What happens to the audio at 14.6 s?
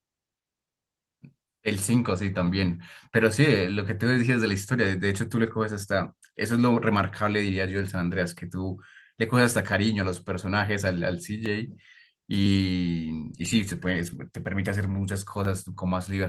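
At 14.6 s you're inside a run of periodic USB or driver dropouts spanning 10.46 to 15.45 s. Something stalls the audio driver about once a second, skipping roughly a millisecond of sound each time, so you hear evenly spaced ticks, about seven in all.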